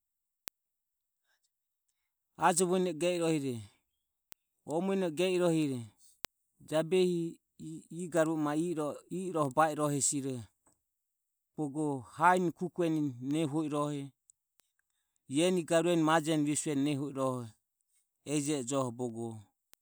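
From 0.48 s right through to about 19.7 s, the speech carries word clock ticks, around thirty sharp clicks coming roughly every 0.7 seconds. The receiving device is running on its own clock rather than locking to the sender's, so the two drift apart, and each time they slip past each other a sample gets dropped or doubled. That steady tick rate points to the clocks disagreeing by something like 40 parts per million.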